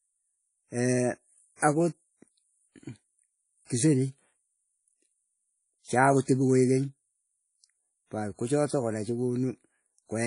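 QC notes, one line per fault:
Throughout, likely WMA compression: the speech rings and sounds washy, with hiss that swells and fades with the signal and nothing above 10.1 kHz, which fits a low bitrate near 32 kbps. Unlike a plain low-pass filter, the noise smears over tens of milliseconds.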